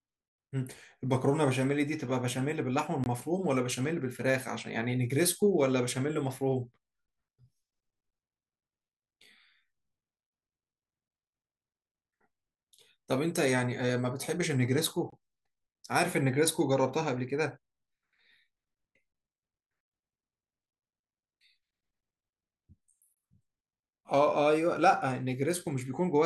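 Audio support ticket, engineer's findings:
Gap between chunks: hard-edged silent holes about 21 ms long at 3.04, 7.06, 11.08, 15.10, 19.12 and 23.15 s, every 4 s. Likely playback or packaging inserting padding at each chunk join. Unlike a dropout, no speech is lost; speech resumes intact after each hole.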